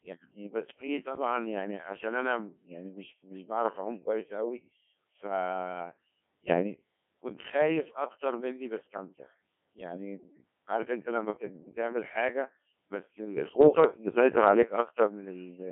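Codec 2 vocoder, throughout: the speech is carried by a very low-rate vocoder that sends only pitch, voicing, energy and a coarse spectral envelope, and the decoder rebuilds each frame from sine waves. The original waveform is never preserved, so the result is heavily buzzy and robotic. The thinness points to a rate around 1.6 kbit/s, and the band is confined to roughly 150 Hz to 3.4 kHz, like a radio line.

Bit errors on digital voice radio, 0.66 to 0.87 s: over about a fifth of a second, roughly one bit in twenty arrives flipped across a handful of vocoder frames. Because each bit steers the pitch, level, voicing or envelope of an entire frame, the synthetic speech lurches in pitch and loudness and breaks into warbling, bleepy gibberish before settling.

Sudden gain jump, 1.02 to 1.16 s: the level of the speech and its background drops together by about 6 dB in a single step, with no fade between the two levels, and stays down for roughly 0.14 s. 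This is likely a digital gain change applied without a ramp.

Bit errors on digital voice radio, 8.80 to 8.97 s: a second burst at a similar error rate corrupts a few frames. The parameters decoded for those frames are wrong, so the speech again jumps in pitch and tone colour and turns into brief robotic warbles.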